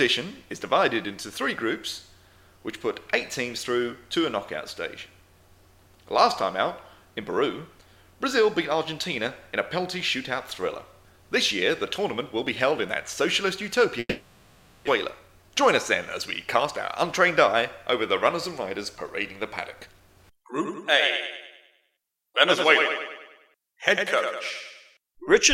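From 13.99 to 14.89 s the audio turns into a fading buzz that ends in a brief silence, then resumes with roughly 0.6 s missing. This is likely a long network dropout: the receiver extended the last sound for about 0.88 s while nothing arrived. Afterwards the audio briefly runs hurried at unchanged pitch, at 110% from 15.19 to 15.63 s and at 113% from 19.75 to 20.79 s. This is jitter buffer speed-up, which trims pitch-period pieces totalling about 50 ms and then about 150 ms to cut the excess delay built up after the gap.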